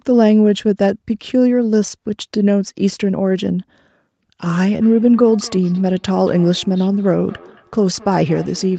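From 4.81 s onward, feedback echo between two devices: another device's playback re-enters the microphone, repeating the speech roughly every fifth of a second, about 24 dB down.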